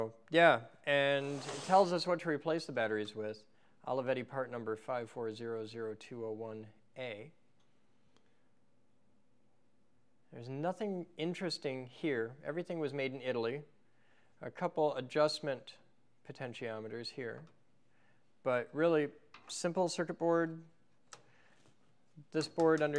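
No technical faults are audible.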